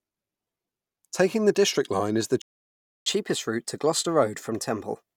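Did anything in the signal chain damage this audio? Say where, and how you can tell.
Yes. A playback stall runs from 2.42 to 3.06 s, at the playback stage. Right after "is the", the speech cuts to silence for about 0.65 s and then resumes. A gap of silence like this is the mark of an output buffer running dry, most likely because the player was starved of data or its audio thread was held up.

Catch-up at higher speed follows from 3.06 s to the end at 5.17 s, also in the player. Once sound returns after "is the", the speech runs 1.1 times faster and sits about a semitone and a half sharp. Because speed and pitch rise together, the player is resampling its accumulated backlog to recover the time lost in the stall, rather than time-stretching, which would keep the pitch steady.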